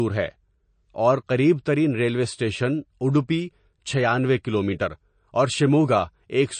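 Across the whole recording the speech sounds watery and swirly, with nothing above 9 kHz and s sounds smeared into a metallic chirp. This is likely MP3 compression at a low bitrate, consistent with roughly 36 kbps, where the encoder cut the treble and dropped weak frequency lines frame by frame.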